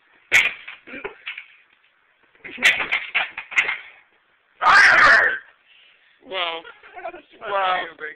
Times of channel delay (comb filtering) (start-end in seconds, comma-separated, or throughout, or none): 2.73-5.45